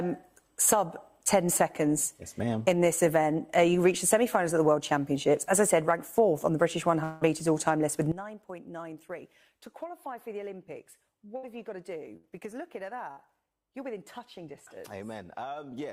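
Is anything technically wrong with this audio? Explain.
Yes, there are three kinds of fault.

Long network dropout, 7.03 to 7.23 s: about 180 ms of audio appears to be missing, likely because nothing arrived over the network. The receiver fills nearly the whole gap by extending the last sound as a fading buzz or hiss, with no true silence, then resumes later in the audio.

Sudden gain jump, 8.12 s: the level falls by about 16 dB in one sample and stays down until the end. Sound and background noise drop together with no ramp, which likely points to a gain setting or bit shift applied instantly.

Burst of packet loss, at 11.37, 12.17 and 13.11 s: each time about 60 ms of audio goes missing after consecutive packets were lost or arrived too late. The receiver carries the previous sound forward as a short, decaying buzz or hiss lasting roughly 55 to 65 ms. The audio then jumps ahead, so the section in between is lost.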